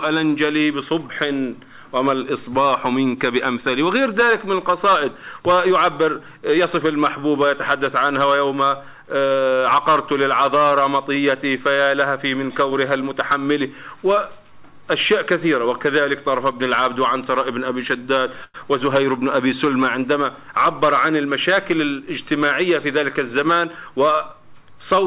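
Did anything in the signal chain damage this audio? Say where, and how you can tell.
Yes. At 18.44 s the sound briefly stops moving forward. The last moment is stretched into a short fading buzz or hiss for about 100 ms, and then the audio resumes exactly where it left off with nothing lost. That points to the network and call-processing stage, most likely a call audio freeze. Delayed packets let the jitter buffer run dry, so the receiver filled the wait with a decaying continuation. That adds a 100 ms gap rather than cutting anything out.

From 20.48 to 21.99 s the audio sounds slightly hurried, running about 6% fast while the pitch stays put. This is a jitter buffer speed-up in the same call-processing stage. With the buffer holding roughly a tenth of a second too much, the receiver trimmed many tiny pitch-period-sized slices in succession to bring the delay back down. The telephone-band sound throughout, with nothing above 4 kHz, comes from the G.711 A-law call codec the audio passed through.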